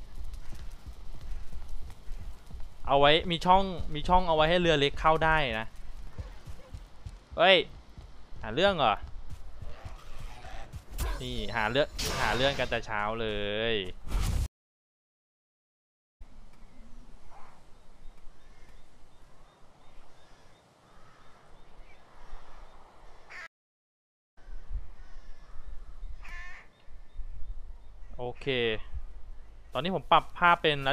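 Two stream reconnect dropouts break the audio: silence of 1.74 s from 14.46 to 16.22 s, and 0.9 s from 23.47 to 24.38 s. Each time the connection dropped and a fresh decoder restarted mid-stream, so playback resumes about two seconds and about one second later respectively, skipping material.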